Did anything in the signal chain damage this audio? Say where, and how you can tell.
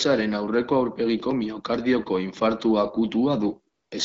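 Yes: AMR comfort noise from 3.73 to 3.91 s. The codec's discontinuous transmission judged the talker silent and stopped speech frames, so the receiver filled the 180 ms gap with smooth synthetic noise.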